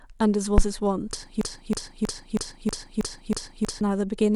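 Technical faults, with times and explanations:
0.58–0.65 s, phantom power thump: a supply switching on or off on the live input steps through the coupling capacitors, giving a deep thump that fades within about 17 ms. It shows as a low-frequency burst on the spectrogram.
1.41–3.81 s, broken-record loop: the same 0.32 s fragment repeats back to back eight times, likely from a stalled stream. The intended audio is lost, and the waveform shows identical repeating blocks.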